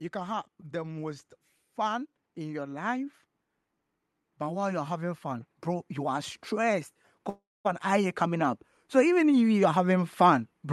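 From 0.12 to 3.15 s the level swells by about 5 dB, with voice and background rising together: automatic gain rising, as the gain control judges the input too quiet and lifts its gain step by step. A second, larger rise of about 9 dB runs from 4.22 to 9.50 s.

Within that second rise, from 7.29 to 7.67 s, the sound is carried on and then fades, leaving about 240 ms of silence before the audio returns with a stretch missing. This is likely a long network dropout, with the receiver filling the gap until packets arrive again.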